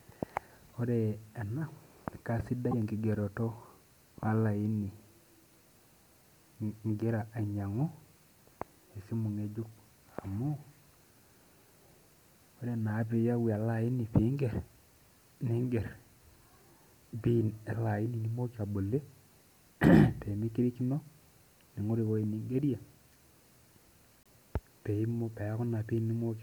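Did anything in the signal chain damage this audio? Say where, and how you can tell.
Yes. Short bursts of about 30 to 45 ms at 0.72, 2.71 and 24.23 s jump ahead and come out garbled. The likely cause is a broken MP3 bit reservoir at the codec stage, where frames of about 26.1 ms borrowed bytes that are gone. A plain dropout would leave silence instead of scrambled sound.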